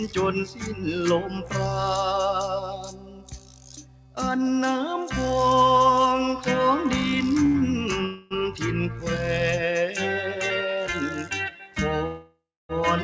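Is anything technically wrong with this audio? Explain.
Yes. Throughout, held and fading sound pumps and thins, swinging by about 10 dB. A noise suppressor built for speech was left on the audio, treating steady tones and tails as noise.

Sound cut by the noise suppressor: at 0.45–0.85 s, 1.25–1.55 s, 2.72–4.17 s and 11.53–11.76 s, sustained sound sinks by about 10, 10, 11 and 9 dB while sharper onsets pass through.

Short stall from a late packet: at 7.46–7.57 s, a sound hangs on for about 84 ms with a slight buzz or dip. The jitter buffer ran dry and the last sound was stretched until the packet arrived.

Call audio freeze: at 8.05–8.34 s, the audio turns into a fading buzz or hiss for about 254 ms. At 12.06–12.72 s, it stalls for 630 ms, and 280 ms of that is silence. Each time, playback resumes where it stopped, so nothing is lost. The likely cause is packets delayed in transit, leaving the receiver to fill the gap. 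Through all of this, the call path's band limit shows, with nothing above 8 kHz, which fits a G.722 codec.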